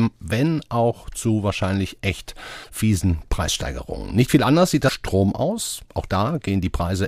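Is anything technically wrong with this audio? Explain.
Yes. Two short bursts of damaged data in a compressed stream break up the speech, at 2.60–2.67 s and 4.85–4.90 s. In each spot, bytes in the coded stream are wrong, so the decoder misreads those frames, loses sync and hunts for the next valid frame header. The result is a brief chirp, squawk, click or short hole lasting 50–70 ms.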